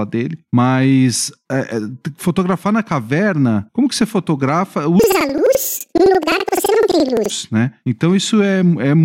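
Planar audio read as interleaved, 5.0 to 7.3 s: 4096-sample blocks of left-then-right data play twice at double speed, an octave high with 11.7 Hz flutter.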